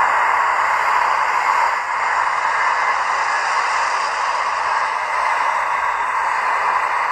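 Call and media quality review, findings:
Digital radio blending to analogue, 1.67–5.21 s: 367 ms cross-fade to FM, level down about 2 dB, faint hiss roughly 40 dB under. Receiver lost digital lock.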